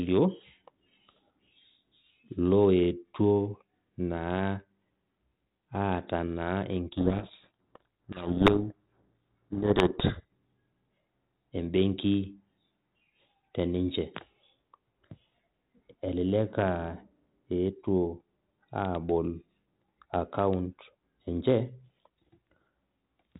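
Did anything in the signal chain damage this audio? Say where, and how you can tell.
Yes, at the codec. From 6.94 to 10.25 s the speech is buried in harsh distortion, a codec payload misread on the G.726 stream, which sounds like the two ends reading the code words' bit order backwards. It clears once the packing matches again.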